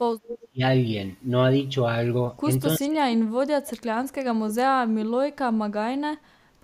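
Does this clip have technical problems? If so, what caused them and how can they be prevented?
Yes, there are two kinds of problem. From 0.23 to 0.48 s there's an echo leak: a delayed copy of the speech, trailing by about a third of a second (around 330 ms) and sitting roughly 10 dB below the main speech. That's likely a far end playing the call on a loudspeaker, with its echo canceller failing to remove everything the microphone picked up and sending the leftover back. A headset at that end, or a better-tuned canceller, would prevent it.

Then there's speech suppressed in double talk, first from 0.41 to 0.62 s, overlapping the tail of the echo, and again, much longer, from 2.78 to 5.16 s. The speech ducks hard in pieces, dropping as deep as about 35 dB in the short stretch and about 40 dB in the long one, with around two seconds gutted in total there. The likely cause is an echo canceller that can't separate the local talker from loudspeaker echo while both sides speak, so it turns everything down. 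Using a headset, or a canceller with proper double-talk detection, would prevent it.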